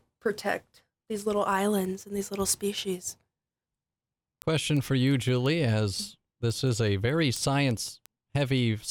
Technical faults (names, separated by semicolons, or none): word clock ticks